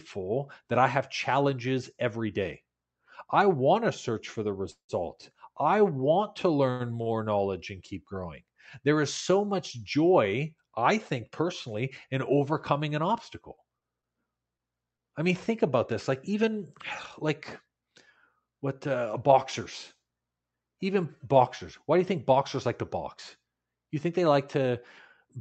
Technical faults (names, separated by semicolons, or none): call audio freeze; short stall from a late packet; scattered short gaps; jitter buffer speed-up